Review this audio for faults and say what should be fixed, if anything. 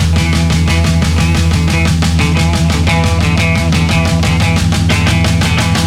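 A USB whine runs from the start to 2.15 s: a fixed-pitch tone built on 1 kHz, with its strongest component at the 10 kHz multiple, sitting roughly 35 dB below the sound. Current drawn in 1 ms USB frames is leaking into the audio through power or ground. A spectrogram shows evenly spaced horizontal lines at 1 kHz intervals, brightest at 10 kHz, ending abruptly at 2.15 s. To prevent it, use an isolated or separately powered interface, or a USB isolator.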